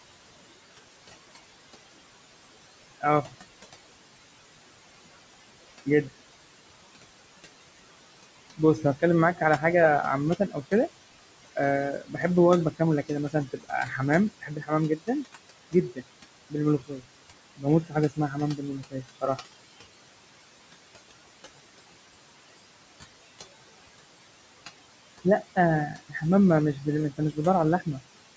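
A speech recording over a call microphone path, with nothing above 8 kHz and room noise sitting about 14 dB under the voice, carries noise suppressor artifacts throughout. The suppressor pulls the steady background down by about 21 dB frame by frame, so the noise drops away in pauses and swells back under each phrase. The same suppressor also cuts speech it misreads as noise, at 3.01–3.33 s, 8.57–9.63 s, 10.36–10.72 s, 11.45–15.09 s, 15.71–19.45 s and 25.24–27.99 s. Drops reach about 11 to 22 dB, deepest in the two mid-clip stretches, where roughly a second or more of soft consonants and word endings sounds swallowed.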